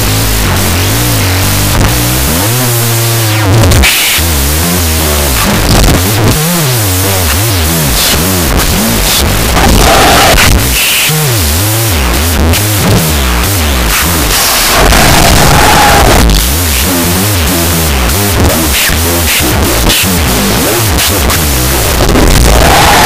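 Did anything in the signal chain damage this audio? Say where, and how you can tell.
Yes, at sample-format conversion: a wrong sample width throughout. Sixteen-bit samples read as unsigned 8-bit split each value into two bytes, so the speech plays at half speed, an octave low, buried in loud noise. The waveform looks like a dense block, and the spectrogram shows a broadband haze with faint, downward-squeezed harmonics.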